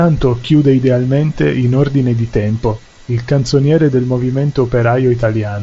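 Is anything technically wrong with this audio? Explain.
No, nothing's wrong here: it's speech coming over a Bluetooth headset link using the mSBC wideband codec, so the top end stops at around 7.7 kHz, which is simply how that link carries sound.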